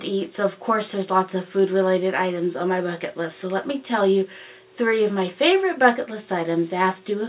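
Nothing is technically wrong with this audio, which carries the narrow telephone-band sound of a G.711 A-law call path with nothing above 4 kHz.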